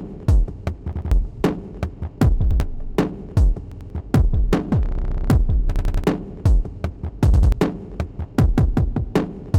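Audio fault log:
0.93 to 7.52 s, repeated buffer, five events: at 0.93, 3.72 and 7.34 s the same 93 ms piece plays twice extra, at 2.51 s once, and at 5.76 s three times. Each repeat meets the previous one at a hard join, giving a stutter of about 11 repeats per second. New audio arrived late, so the device replayed its last buffer, which fits a 4096-sample buffer. Roughly 0.1 to 0.3 s of sound is lost at each event.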